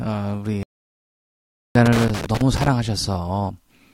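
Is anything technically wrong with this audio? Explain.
Yes. There are two faults.

From 0.63 to 1.75 s, the speech drops out for about 1.1 s. This is likely a playback stall: the player ran short of data or was blocked. The speech then resumes.

From 1.86 to 2.68 s, there is loose connector crackle. A bad contact is making and breaking repeatedly. It chops the signal into an irregular burst of scratchy crackle.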